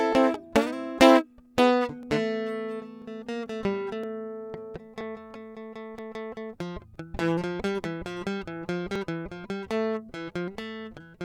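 Overlapping time stamps between roughly one-second stream segments make the player discard music that was never actually doubled, causing an overlap between stream segments. The waveform jumps, giving tiny clicks or skips at 2.03–2.06, 3.02–3.04, 4.04, 5.01, 5.99, 6.96 and 8.96 s.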